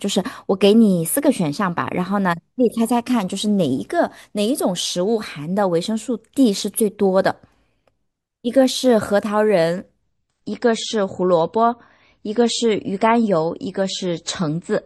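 Adaptive stream at a lower bitrate from 10.02 s to the end of this speech clip: the quality drops suddenly without a gap, treble vanishes above 8.3 kHz and codec artefacts rise, consistent with the player switching from roughly 128 kbit/s MP3 to 32 kbit/s as the connection slowed.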